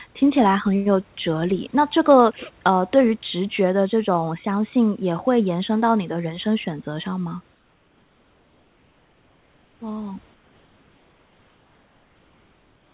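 From 7.55 to 9.8 s, and again from 10.34 s to the end of the clip, the sender likely stopped transmitting during the pauses, and the receiver filled each gap with comfort noise in place of the background. For about 2.25 s and then 2.6 s, the room's real background is replaced by a flat, featureless hiss about 3 dB quieter. All of this comes over the narrow telephone-band call path, with nothing above 4 kHz.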